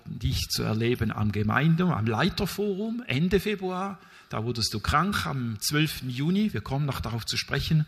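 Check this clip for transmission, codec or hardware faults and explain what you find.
One transmission fault is present: a stream segment skipped at about 5.12 s. The sound jumps abruptly forward at that point, with a brief blip at the join. Material that should have followed is missing. The likely cause is a segmented stream where one chunk failed to arrive or decode. The player then carried on with the next chunk, splicing the two sides together and dropping everything between.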